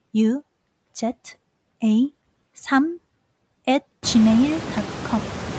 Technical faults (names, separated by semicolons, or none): noise suppressor artifacts